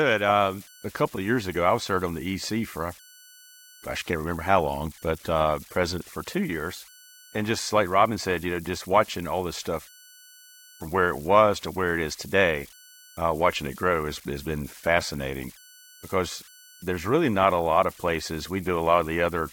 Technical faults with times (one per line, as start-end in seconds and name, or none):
0.00-19.52 converter idle tones